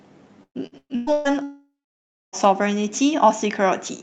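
From 0.43 to 1.28 s the speech breaks up into a choppy, metallic stutter. This is repeated packet loss (robotic sound): five separate holes open in quick succession, the longest about 121 ms, and each is papered over by stretching the last bit of sound, so roughly 61% of that span is concealment. On a spectrogram the harmonics turn into flat, smeared bands that repeat rather than move, and the waveform shows blocky, near-periodic chunks between brief normal stretches.

At 1.43 s the sound collapses into a fading buzz that lasts under a third of a second. It then goes quiet for about 0.61 s and only resumes at 2.36 s, with nothing in between recovered. This is most likely a long network dropout, in which the receiver got no audio for almost a second and could only extend the last sound briefly before giving up. The waveform shows a short decaying tail and then a flat line. On the spectrogram a smeared, dimming patch leads into an empty gap. 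Above about 8 kHz the spectrogram is bare throughout, which fits the Opus call path's band limit at a rate around 64 kbps.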